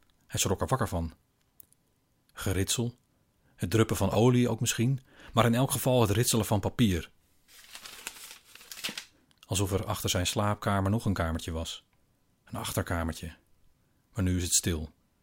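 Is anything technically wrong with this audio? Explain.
Yes. From 4.12 to 4.15 s, chunks play out of order: one 11.6 ms chunk arrives a chunk late, leaving a brief jumbled moment. Unlike a dropout, no audio is missing.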